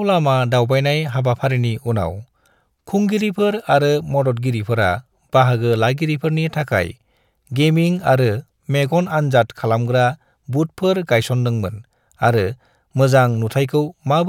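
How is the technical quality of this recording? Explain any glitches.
Listening closely, nothing in the recording stood out as a technical problem, so there are no glitches to explain.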